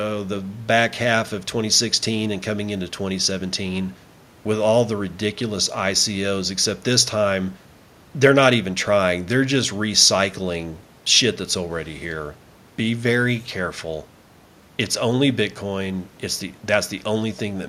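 No technical faults can be heard anywhere in the speech recording, and the signal holds steady throughout.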